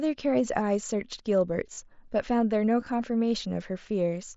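At 1.74 to 1.78 s, concealed Bluetooth headset packet loss fills a gap of about 38 ms, which fits five consecutive lost packets. The receiver loops the best-matching recent stretch of waveform, giving a brief buzzy tone held at full level and a slight warble as real audio resumes. On a spectrogram this shows as flat, repeated harmonic bands. At 2.80 to 2.86 s, shorter isolated losses are scattered and nearly hidden. Through the light graininess of the mSBC link, they appear only as small repeated waveform segments.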